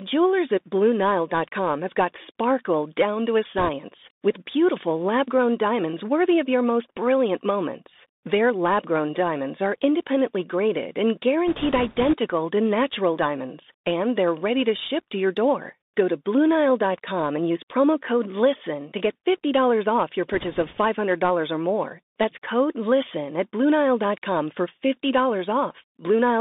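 The whole clip of speech has passed through a Bluetooth CVSD headset codec. This codec sends one bit per sample, each saying only up or down, and adapts its step size. The sound points to a 64 kbit/s headset link. The band runs from about 200 Hz to 3.7 kHz, so the speech is thin and boxy. The damage is plainly audible. Loud, bright sounds outrun the step and distort, s sounds turn scratchy, and a granular hiss sits under everything.

Bit errors on a Bluetooth voice link appear three times. Flipped bits each nudge the step a little, and the error fades quickly, so there are no sharp clicks. Instead a rushing crackle rides on the speech. The first burst runs from 3.58 to 3.69 s, after "sparkle down to a" and before "with beautiful lab grown." The error rate is around 4 percent. The second, the longest, runs from 11.48 to 12.14 s at a similar rate, between "are independently graded and" and "to natural diamonds and." The third runs from 20.33 to 20.78 s, after "off your." It is lighter, at about 2 percent.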